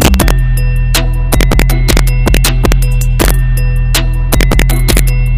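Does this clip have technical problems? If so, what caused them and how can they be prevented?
Yes. Integer overflow runs through the whole clip. Something pushes the level about 4 dB past the largest value the integer format can hold. Those samples are not held at the limit; they wrap around to the opposite sign. Each loud peak jumps across the full range in one step, which is heard as harsh cracks. Only a small share of samples, around one or two percent, goes over, so the cracks come on the loudest moments. They are sharper than ordinary clipping. Preventing it means using saturating arithmetic or a limiter before conversion, and leaving headroom in gain stages.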